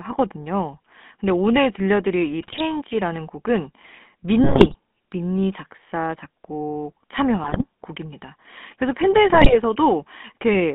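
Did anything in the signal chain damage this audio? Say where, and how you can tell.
Yes. The codec stage put the whole clip through the GSM full-rate codec. The speech has a constant buzzy, gravelly roughness, and the band runs only from about 200 Hz to 3.5 kHz. That fits a 13 kbps vocal-tract model driven by sparse, regularly spaced excitation pulses.

GSM bit errors occurred on the radio link at 2.41 to 2.61 s, 4.43 to 4.76 s, 7.44 to 7.64 s and 9.3 to 9.57 s. Corrupted filter, pitch and gain values in the decoded frames break the sound into squawks, pops and gargling, with sudden jumps in level and tone.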